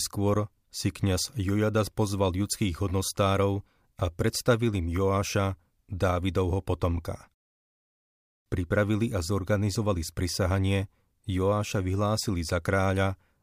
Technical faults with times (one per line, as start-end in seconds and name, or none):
none